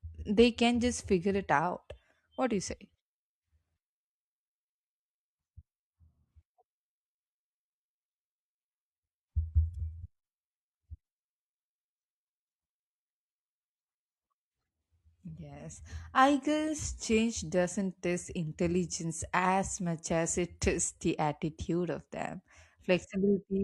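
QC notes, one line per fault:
Nothing stood out on listening to this clip.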